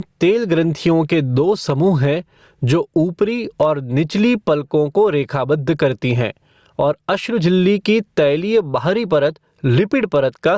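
Gain pumping runs throughout: the gain is pulled down by around 15 dB on each loud sound, likely from excessive gain hitting a fast limiter. Unlike a noise gate, it turns the level down rather than cutting it out.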